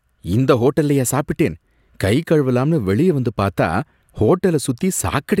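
No technical faults can be heard anywhere in this speech recording.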